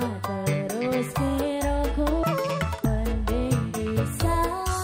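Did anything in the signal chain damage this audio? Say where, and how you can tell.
Yes: from 2.23 to 2.85 s the audio was read two samples at a time, a sample-format fault. It plays at double speed and an octave higher.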